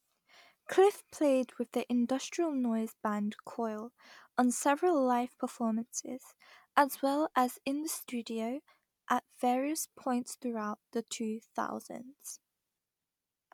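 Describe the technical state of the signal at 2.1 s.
At 2.1 s the speech signal is intact, with no audible technical fault at that moment.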